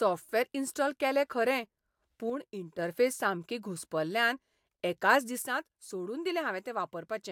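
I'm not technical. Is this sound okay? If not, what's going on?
No. The speech suddenly gets quieter twice: from 2.30 to 2.79 seconds, and again from 5.42 seconds to the end. Each drop is abrupt, like someone turning the volume down. The likely cause is one channel dropping out: the recording has a left and a right side, and one side goes silent for those stretches. When both sides are combined, the remaining side alone sounds noticeably quieter.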